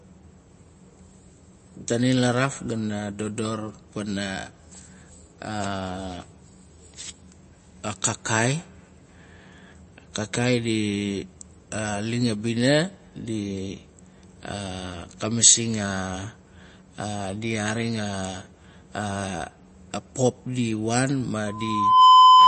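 MP3 compression, throughout the 22-second speech clip: nothing survives above 8.3 kHz, so the speech sounds dull and boxed-in, and its sibilants carry a watery, swirling residue with metallic chirps. Consonant attacks smear rather than snap. The likely cause is heavy MP3 encoding, where a starved bit budget forces the encoder to cut the treble at a fixed point and drop weak frequency lines that flicker on and off between frames. The plainly audible damage fits a low bitrate, somewhere near 33 kbps.

Loudspeaker feedback squeal, from 21.47 s to 22.48 s at the end: a pure 1 kHz tone rises out of the speech and swells over roughly half a second into a piercing squeal about 15 dB louder than the voice. A microphone is picking up the loudspeaker it drives, and at 1 kHz the loop returns more than it receives, so that tone feeds on itself each time around until the clip ends.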